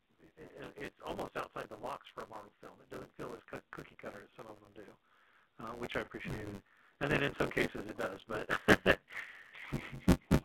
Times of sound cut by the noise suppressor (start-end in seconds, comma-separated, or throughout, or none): none